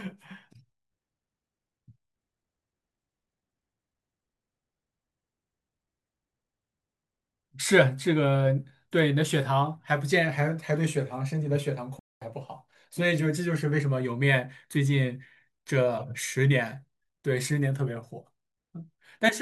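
Speech cuts to silence at 11.99 s for about 220 ms, resuming at 12.22 s, a playback stall, likely from the player running short of buffered data.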